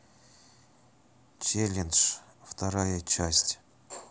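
No technical faults are audible anywhere in the speech recording.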